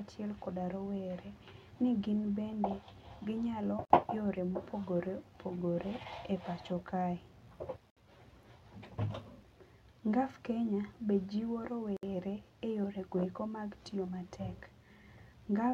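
Separately encoded pieces of this speech were joined untrimmed, leaving a gap at each join roughly every 4 s: 3.85–3.90 s, 7.90–7.97 s and 11.97–12.03 s, silences of 51–64 ms with smeared edges.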